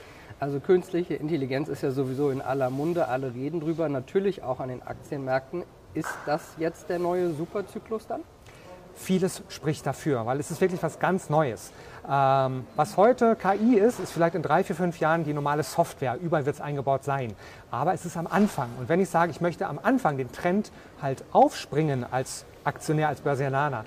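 Listening to the whole recording, nothing stood out as a technical problem at any point.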